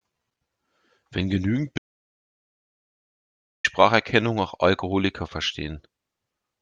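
At 1.78 s the speech cuts out mid-flow. This is an audio dropout to silence. Silence follows, with no room tone, until 3.64 s. About 1.86 s of speech is lost. The input was likely disconnected or muted while recording continued.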